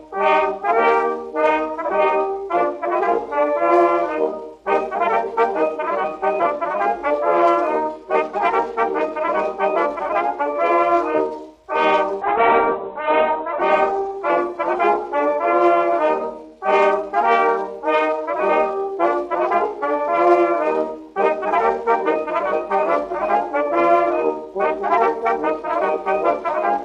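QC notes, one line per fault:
12.22–17.17 s, call bitrate drop: the encoder was pushed to far fewer bits, consistent with roughly 48 kbps falling to 8 kbps, and the audio band narrowed from 20 kHz to 4 kHz. The sound turns muffled and rough, worst for about 1.1 s, before recovering.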